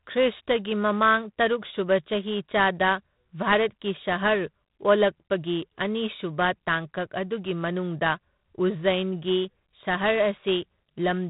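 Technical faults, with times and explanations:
Throughout, G.726 ADPCM: the speech carries a harsh, rasping hiss that swells and fades with its level, over a band that stops at 4 kHz. The coarse difference coding fits about 24 kbit/s. Plain telephone band-limiting would sound dull but clean, without this level-following grit.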